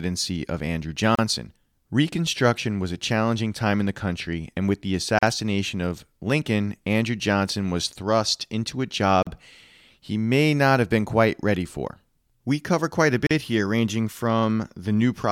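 A gap at a join of encoded pieces opens every 4 seconds in the speech: at 1.15 s (33 ms), at 5.19 s after "country and with the", at 9.23 s after "was thrust into a", and at 13.27 s between "cover quite a" and "here ranging" (each about 40 ms). The pieces were encoded separately and joined untrimmed, so each piece's leading encoder delay and final padded frame remain as a brief drop-out before the speech resumes.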